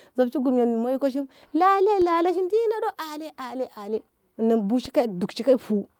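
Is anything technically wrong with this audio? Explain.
Yes, there are two DC steps, at 2.02 s and 4.86 s. Each time the waveform's zero line suddenly jumps, then drains away through a gentle high-pass around 2 Hz. You hear a low thump at each point while the speech carries on unaffected.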